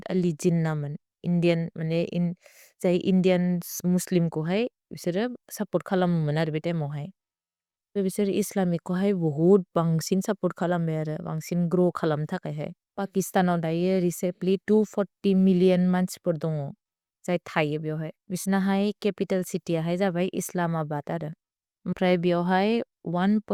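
A speech recording with no technical faults to report. Nothing in it calls for a time or a cause.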